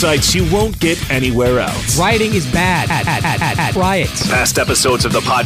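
At 2.90 s the audio catches in a system hang loop that runs until 3.76 s. The machine or its driver stalled while the sound hardware kept replaying whatever was sitting in its ring buffer. A 171 ms chunk, which fits an 8192-sample buffer, comes round five times at about 5.9 Hz. That gives a choppy, machine-gun stutter rather than a buzz, and roughly a second of real audio never makes it through.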